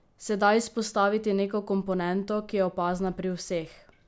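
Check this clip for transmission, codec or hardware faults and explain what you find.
Nothing turned up here: I listened through the speech and there's no transmission, codec or hardware trouble to point to.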